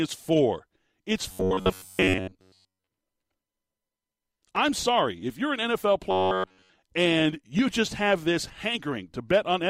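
From 1.32 to 2.87 s, and again from 6.11 to 6.79 s just before "and you just have", the speech turns into a rigid buzz near 94 Hz. That's robotic sound from repeated short buffers, likely from about 11 ms chunks being looped over roughly two thirds of the audio.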